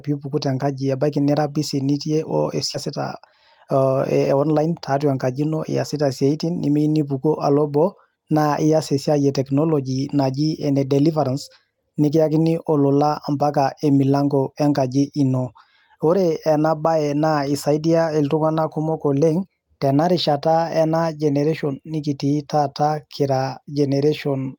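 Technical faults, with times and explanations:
2.73–2.75 s, skip ahead: a stretch of about 0.4 s was discarded while later audio already sat waiting, so nothing fills the break. The speech jumps straight forward, its two sides joined almost directly, and a piece of the utterance simply vanishes.
2.85–4.72 s, jitter buffer speed-up: the buffer was still holding more audio than its target, so the receiver trimmed pitch-period-sized pieces repeatedly, about a fifth of a second in total. Speech runs at roughly 111% speed with unchanged pitch, sounding hurried until "tatua enkaji ino iasita".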